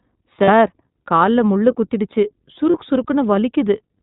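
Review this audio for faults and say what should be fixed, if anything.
The whole clip has gone through the iLBC codec, and it's plainly audible: nothing above 4 kHz survives, so the speech is dull and band-limited, with a slightly rough, synthetic edge from the excitation being modelled frame by frame. The coloration fits iLBC at around 15.2 kbps with 20 ms frames. To prevent it, negotiate a wideband codec such as Opus or G.722 on this link instead of iLBC.

There are also lost iLBC frames at 0.44 to 0.49 s and at 2.70 to 2.76 s, the second right after "கால்ல முள்ளு குத்திடுச்சு". Each gap is about 40 ms, which fits two dropped 20 ms frames. The decoder fills it by repeating the last pitch cycle mixed with noise, so you hear a brief held, buzzy vowel before the speech snaps back cleanly. To prevent it, fix the packet loss on the network path, or add forward error correction or redundancy so single bursts get recovered.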